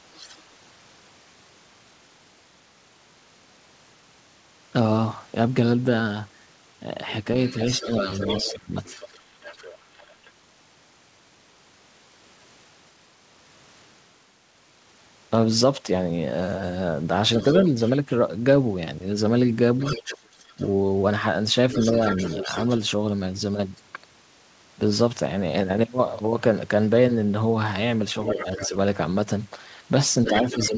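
A speech recording from a call, carried over a path that cuts everything above 8 kHz, which fits a wideband codec such as G.722. Other side's voice leaking through appears four times. It is faint, about 25 dB below the talker, from 0.14 to 0.38 s. It is much louder, around 10 dB below, from 7.47 to 10.31 s, 17.38 to 22.78 s, and 28.24 s to the end. This is likely residual loudspeaker echo the canceller failed to remove. It is marked by a second voice added on top rather than any loss in the main talker. Speech suppressed in double talk accompanies the three louder stretches. The talker's own level dips by roughly 20 dB within 7.5 to 8.72 s, for about half a second in total. Within 17.62 to 22.51 s it dips by roughly 15 dB, for about a third of a second overall. From 28.33 s to the end the dips are shallower, around 10 dB, likely the echo canceller turning everything down when both sides spoke at once. 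What separates this from a network dropout is that the cuts occur only while the leaked voice is present, and the talker's voice ducks, thins or cuts out in pieces rather than glitching at random.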